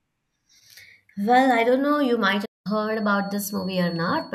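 At 2.34 s a feedback whistle begins and runs to the end of the clip at 4.35 s. It is a thin, steady tone at 4.4 kHz. It sits well below the speech, roughly 25 dB down, and its level swells and fades slowly. The likely cause is a loudspeaker-to-microphone loop held just at the edge of feedback. One frequency keeps ringing there but never builds into a howl.

At 2.45 s a playback stall cuts the speech off in mid-flow. The output goes silent for about 0.2 s, until 2.67 s, then the speech resumes. The likely cause is the player running short of data or its audio thread being blocked, so nothing reached the output until it recovered. The gap sounds like an abrupt dropout, not a natural pause.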